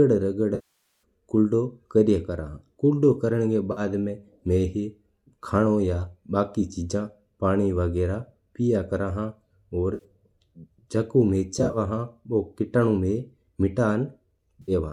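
AAC frame loss with concealment first strikes at 0.55–1.02 s, where about half a second of lost frames is filled from the last good spectrum, smearing and fading the sound before it returns. Shorter losses at 3.72–3.81 s, 9.94–10.04 s and 14.62–14.72 s leave brief noisy, phasey patches. At 11.54–11.78 s, scattered dropouts of a few tens of milliseconds flutter through the speech. Light graininess throughout is likely from low-delay AAC compression at 64 kbps, which fits AAC-ELD.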